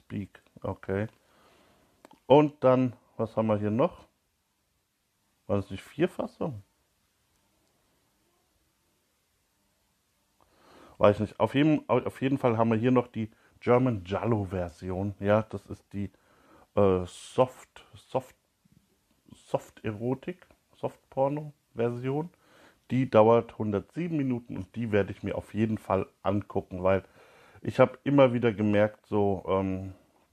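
There are no technical faults to describe in time order in this audio.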